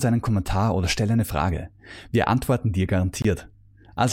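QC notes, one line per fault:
3.22–3.25 s, block of digital silence: a short hole after "antworten dir". About 23 ms was abruptly zeroed, which fits an unfilled 1024-sample buffer.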